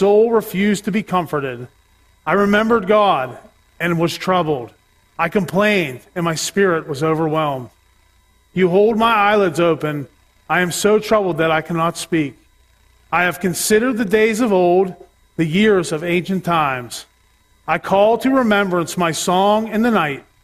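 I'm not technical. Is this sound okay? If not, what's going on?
Yes, nothing in this recording points to a technical problem with the audio signal itself.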